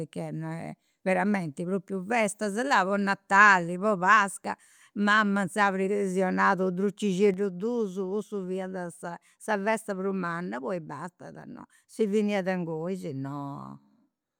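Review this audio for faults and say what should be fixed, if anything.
At 7.34 s the speech drops abruptly by about 5 dB and stays down to the end of the clip. That's a sudden gain jump: the level changes from one sample to the next rather than easing over, and the background noise falls in step with the voice. The likely cause is a gain setting applied in the digital path with no ramp. To prevent it, have any gain change crossfade over a few milliseconds instead of switching instantly.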